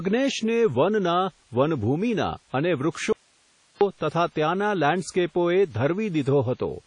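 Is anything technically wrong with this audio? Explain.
Yes, there are two problems. Throughout the whole speech clip, the sound is ringing and washy, with a hiss that swells and sinks along with the voice, and there's nothing at all above about 10.1 kHz. That's most likely WMA compression at a low bitrate, something around 32 kbps. The transform codec smears its quantisation noise over long blocks of tens of milliseconds and throws away weaker detail, so the damage is plainly audible.

Then there's an audio dropout to a faint residue from 3.13 s to 3.81 s. The speech cuts out abruptly for about 0.68 s and comes back just as suddenly, with nothing like a pause or fade. All that's left in the gap is a bed of hiss, roughly 40 dB below the normal level. The likely cause is the wanted signal getting lost upstream while the path after the break stayed live and kept passing its own noise.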